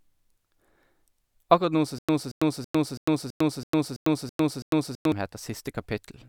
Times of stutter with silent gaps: 1.99-5.12

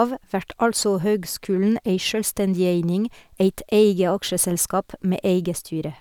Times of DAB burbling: none

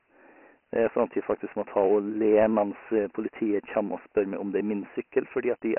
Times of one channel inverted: none

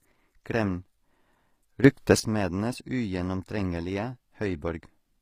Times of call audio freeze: none

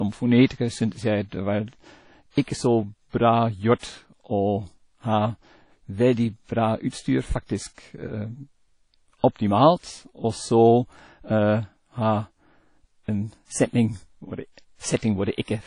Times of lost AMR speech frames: none

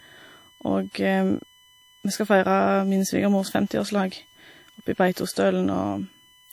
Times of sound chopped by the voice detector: none

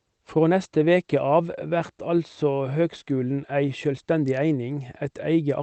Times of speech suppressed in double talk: none

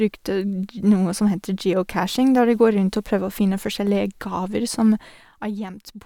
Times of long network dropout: none

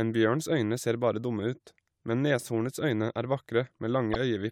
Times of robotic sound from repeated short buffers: none

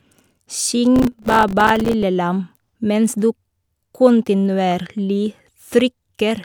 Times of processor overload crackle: 0.96-2.03

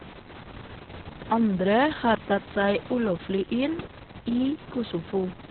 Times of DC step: none

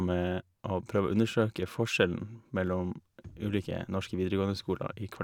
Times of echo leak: none

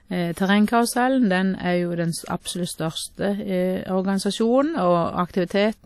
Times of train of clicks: none

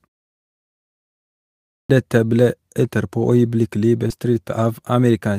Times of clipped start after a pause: 1.67-1.90

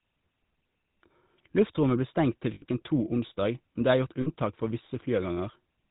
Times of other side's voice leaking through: none

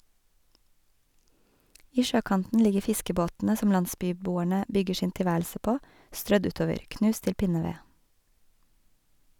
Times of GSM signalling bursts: none

